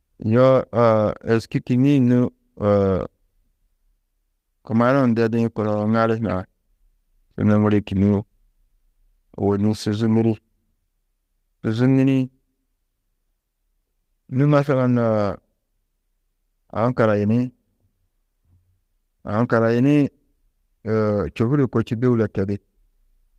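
No technical faults can be heard anywhere in the recording.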